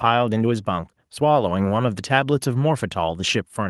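No technical faults can be heard anywhere in this speech recording, and the signal stays intact throughout.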